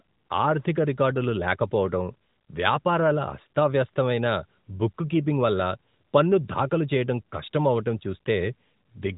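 No technical faults can be heard in this speech recording, which carries the band-limited character of a narrowband mobile call, consistent with the AMR-NB codec at around its 12.2 kbps mode.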